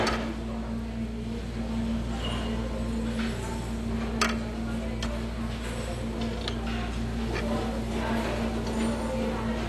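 AAC compression damage runs through the whole clip: nothing sounds above 12.1 kHz, leaving the audio dull, and sustained or hissy sounds carry a smeared, warbling fizz. This is likely AAC-LC coding at a low bitrate, near 32 kbps, discarding and quantising detail too coarsely.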